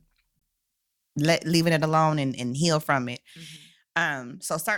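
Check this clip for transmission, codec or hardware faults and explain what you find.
Two faults turn up here, one early and one near the end.

Right at 0.39 to 0.41 s there's a gap between stream segments: two chunks were stamped with roughly 20 ms of daylight between them, so the player filled that slot with silence. You hear a short, hard-edged hole in the speech, but nothing's actually missing.

From 3.57 s, just after "and heal from it", through to the end, the level drops abruptly by about 6 dB and stays down. That sudden step is what you'd expect when one channel drops out, with the mono sum keeping only half the shared signal. That's the likely cause.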